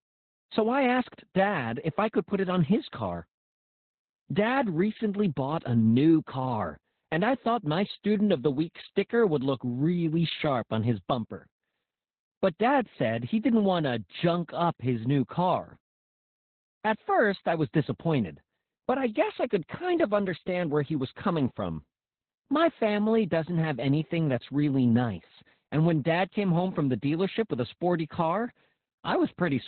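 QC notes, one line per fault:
Throughout: Opus voice compression, heavy damage. The speech has been squeezed into the narrowband SILK mode, which fits a bitrate around 8 kbps. The linear-prediction coder keeps only a rough vocal-tract envelope and codes the excitation coarsely, so the voice comes out muffled and dull, with a hoarse, slightly robotic buzz in place of natural breathiness. Consonant detail is lost with the narrow band, coded in 20 ms frames.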